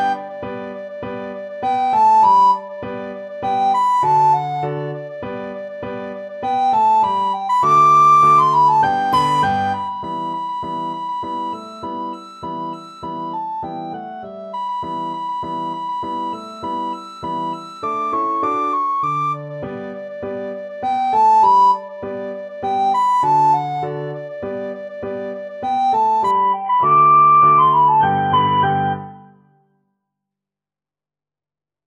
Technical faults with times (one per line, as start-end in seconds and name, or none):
26.31-30.31 adaptive stream at a lower bitrate